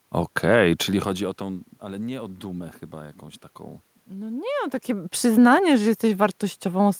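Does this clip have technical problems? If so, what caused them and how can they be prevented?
No, nothing stood out as a technical problem when listening to this speech; the background room sound and the level shifts around 0.5 and 4.5 seconds, where the talker seems to move relative to the microphone, come from the recording situation, not the system.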